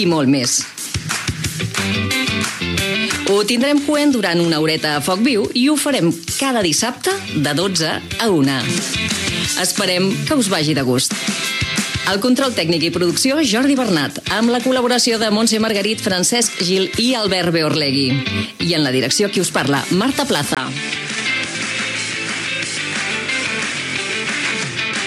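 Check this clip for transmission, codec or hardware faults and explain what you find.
One fault. At 20.55 s, after a 20 ms silence, the sound drops about 5 dB, loses everything above 10.2 kHz and gains new background noise, likely an input switched to a poorer device.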